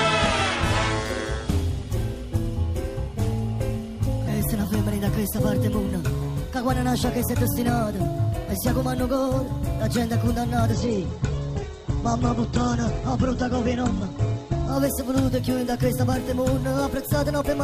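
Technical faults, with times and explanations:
4.28 s to the end, section at the wrong speed: everything runs 1.28 times fast and about four semitones high, likely from playback against the wrong clock.
10.72–14.72 s, adaptive stream at a lower bitrate: treble vanishes above 8.3 kHz and codec artefacts rise abruptly without a gap, consistent with a switch to a far lower Opus bitrate.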